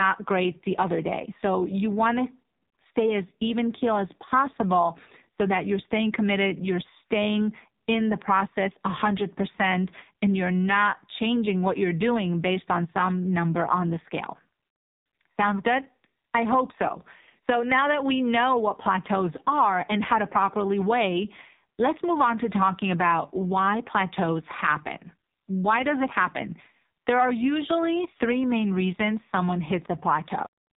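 From the first second to the last, the speech carries the AMR narrowband mobile codec sound. Nothing survives above about 3.8 kHz, and the voice has a buzzy, synthetic edge from heavy coding damage, which points to a low rate around 5.9 kbps. A plain low-pass filter would only dull the sound. Here the vocal-tract model rebuilds each 5 ms from a few pulses, so the speech sounds rebuilt rather than merely muffled.

At 30.46 s the clip has a cut-off end. The sound stops in the middle of an utterance and drops straight to digital silence, with no decay and no tail. The final buffers were never written out. A fade-out would taper, and a dropout would let the audio resume. Here nothing returns, and the silence simply runs to the end of the file.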